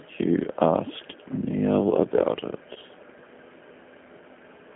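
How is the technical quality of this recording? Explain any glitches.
The technical quality is limited by a low-rate speech codec, with one brief dropout.

G.729 codec, throughout: The speech passed through a G.729-family coder, which fits an 8 kbit/s stream. The coder models the voice with a vocal tract filter, a pitch predictor and a few pulses per frame instead of sending the waveform itself. The line band runs from about 200 Hz to 3.4 kHz, so the speech sounds thin and telephone-like. The codec damage is plainly audible as a rough, slightly synthetic texture.

VoIP packet loss concealed by the speech codec, 2.74 to 2.77 s: About 20 ms of audio went missing, which points to a single lost packet. The decoder filled the gap by extrapolating from its last pitch and filter settings while lowering the gain. Each frame is built from the previous one, so the damage lasts past the gap itself. 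The sound briefly smears into a stretched, fading sound before the speech recovers.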